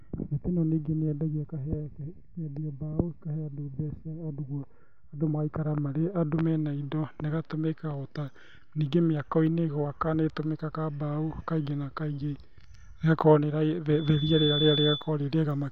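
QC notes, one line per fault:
13.92–15.12 s, loudspeaker feedback squeal: the microphone picks up its own loudspeaker and loop gain passes one at 3.5 kHz, so that tone swells within half a second to about 5 dB above the speech.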